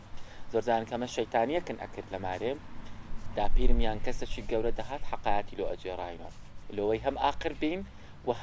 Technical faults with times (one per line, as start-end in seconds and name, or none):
none